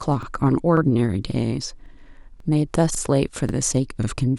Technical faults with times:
0.23-0.27 overlapping chunks
0.77-0.81 overlapping chunks
1.31-1.36 overlapping chunks
1.86-1.90 overlapping chunks
2.40-2.45 overlapping chunks
2.95-2.99 overlapping chunks
3.49-3.53 overlapping chunks
4.03-4.08 overlapping chunks

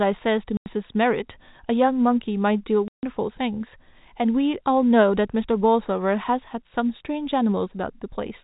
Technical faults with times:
0.57-0.66 packet loss filled with silence
2.88-3.03 packet loss filled with silence

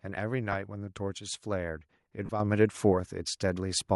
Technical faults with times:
0.00-3.95 Bluetooth LC3 compression
0.52-0.55 lost LE Audio frames
2.26-2.30 lost LE Audio frames
2.40 microphone volume stepped up
3.69 microphone volume stepped up

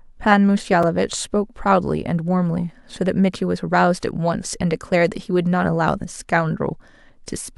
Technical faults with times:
0.83 block of digital silence

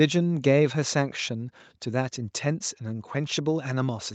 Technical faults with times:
none

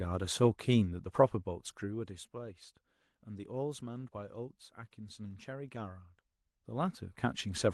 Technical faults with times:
none

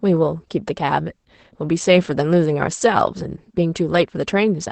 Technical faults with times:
0.00-4.71 Opus voice compression

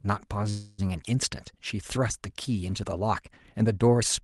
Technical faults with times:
0.49-0.80 call audio freeze

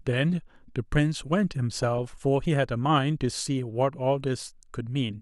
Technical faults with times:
1.79-2.01 DAB burbling
3.89-3.96 DAB burbling

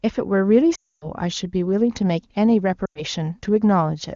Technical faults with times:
0.75-1.09 lost AMR speech frames
2.85-3.03 lost AMR speech frames

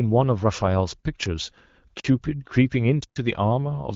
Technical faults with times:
2.00-2.04 block of digital silence
3.04-3.16 block of digital silence

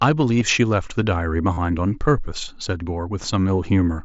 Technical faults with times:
0.40 concealed Bluetooth headset packet loss
1.53-1.57 concealed Bluetooth headset packet loss

